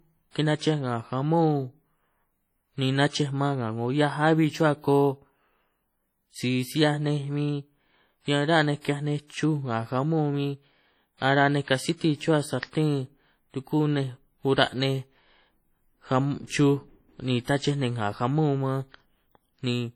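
WMA compression, present from start to finish, likely causes the heavy ringing, washy quality and a hiss that swells and fades with the speech. The transform coder's quantisation noise smears across long blocks and weak detail drops out, consistent with a low bitrate around 32 kbps.

Pre-echo occurs at 0.58, 8.81 (before "ki’hiaj nej"), 16.47 (before "chuj ni tnachej ninj") and 17.44 s (between "ka’ chuj ni" and "tnachej ninj ngà jamón"). Block-wide noise leaks ahead of sharp attacks as a brief hiss lasting 30 to 41 ms, softening each onset.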